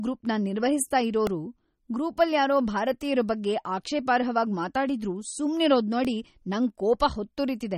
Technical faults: MP3 compression; repeated buffer

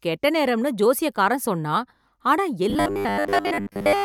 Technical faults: robotic sound from repeated short buffers

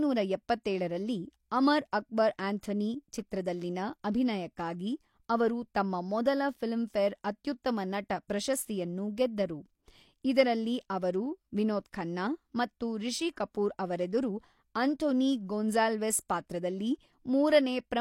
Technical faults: pre-echo

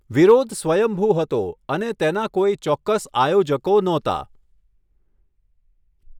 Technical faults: none

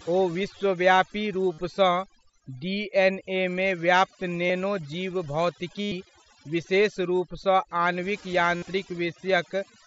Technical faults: overdone noise removal; concealed Bluetooth headset packet loss

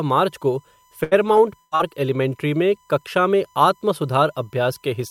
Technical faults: USB whine; burst of packet loss; short concealed packet loss

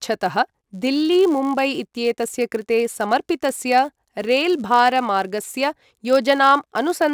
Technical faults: filter restarted on every block

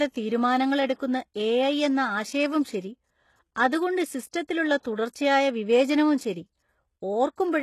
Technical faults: HE-AAC compression

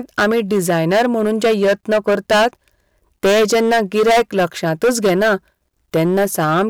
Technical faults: hard clipping

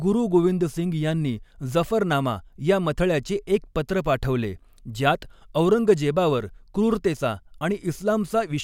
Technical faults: none

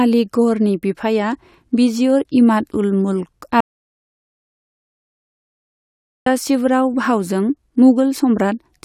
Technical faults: audio dropout to silence

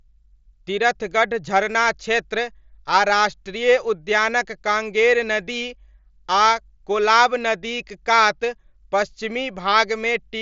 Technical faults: none

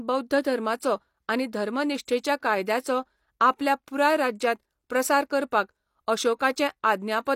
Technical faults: pre-echo

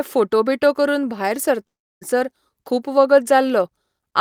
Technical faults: long network dropout

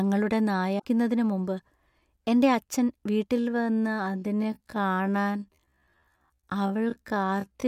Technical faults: damaged data in a compressed stream; time-stretched section

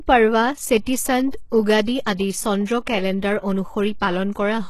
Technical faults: HE-AAC compression; pre-echo

